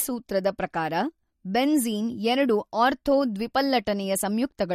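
From start to finish the speech carries audible MP3 compression damage, likely from a low-bitrate MP3 encode, and the damage fits a rate around 48 kbps. Nothing sits above 16 kHz, where the encoder cut the treble outright. Weak frequency lines drop in and out between frames, giving a watery, swirling texture and metallic chirps on s sounds. A spectrogram shows a flat ceiling at 16 kHz and flickering, patchy holes in the upper bands.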